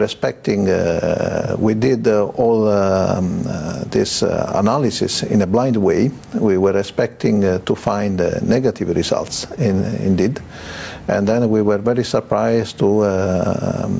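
Gain pumping runs through the whole clip, with a level swing of around 15 dB. The likely cause is input gain set far too high, with a fast limiter clamping down. A noise gate would cut the gaps to silence, which is a different fault. The call path's band limit, with nothing above 8 kHz, is not part of the fault.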